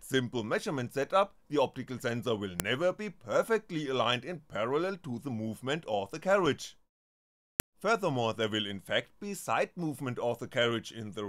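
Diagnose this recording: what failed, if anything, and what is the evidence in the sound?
The failure is at the storage and file-assembly stage: a file header played as audio. Sharp, loud clicks sit at 2.60 s and 7.60 s, exactly 5 s apart. Pieces were joined with their WAV headers intact. Those header bytes play as samples.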